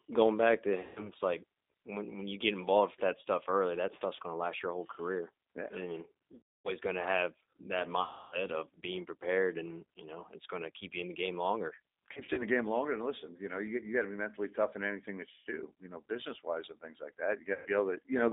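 Throughout, the speech carries G.729 codec damage: an 8 kbit/s coder rebuilding each 10 ms frame from a filter, pitch predictor and a few pulses, so the band runs only 250 Hz to 3.7 kHz and the sound is plainly rough and synthetic.

VoIP packet loss concealed by the speech codec occurs at 0.81, 6.35, 8.02 (ending before "of being prepared and"), 12.13 (after "in the game longer"), 15.30 and 17.54 s (after "wise and things like"). Gaps of 90 to 300 ms are extrapolated into a buzzy tone or coloured noise that fades, with weak, distorted recovery afterwards.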